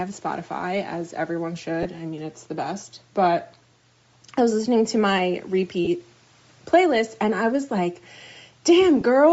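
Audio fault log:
throughout: Bluetooth LC3 compression. The speech has a plainly audible breathy, grainy edge, with the upper band turned hissy and smeared. This is likely a low-rate LC3 stream, consistent with about 32 kbps in 10 ms frames, where much of the upper spectrum is zeroed and filled with noise.
1.83–1.86 s, 5.85–5.88 s, 9.01 s: lost LE Audio frames. Each spot is a brief noisy smear in the speech, about 20 ms at the first two and 10 ms at the last, which fits two missing 10 ms frames and then one. The decoder patched each gap by reusing the previous spectrum with random signs, and that turns the sound into grainy noise.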